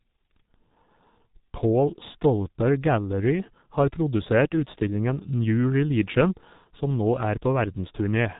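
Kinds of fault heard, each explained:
G.723.1 codec: Throughout the clip, the speech passes through heavy low-rate telephony coding. Content stops at 3.8 kHz, so the voice is muffled and consonants blur, while the coarse, slowly updated voice model adds a hoarse, buzzy roughness. The damage fits a bitrate near 6 kbit/s. A spectrogram shows a hard ceiling at 3.8 kHz with empty space above, and smeared, blocky harmonics below. The waveform looks coarse, without crisp consonant onsets.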